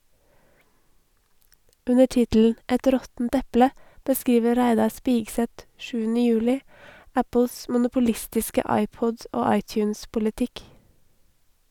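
Nothing stood out on listening to this speech recording.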